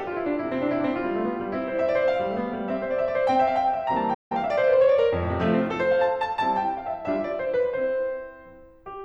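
At 4.14 s the music drops out in a playback stall, going silent mid-phrase until 4.32 s, a gap of about 164 ms. The player likely ran out of buffered data or had its output thread blocked, so nothing reached the output until it recovered. It sounds like an abrupt hole in the music. On a waveform it is a flat line cut cleanly into ongoing signal, and on a spectrogram a blank vertical band across all frequencies.

From 4.32 to 4.96 s the player works off its backlog through time-compressed catch-up, running the music at 1.25 times speed while keeping its pitch. It does this by removing short slices and cross-fading across the joins, so the passage sounds rushed. A spectrogram shows harmonics at their normal heights but events crowded closer in time. The waveform shows a denser envelope.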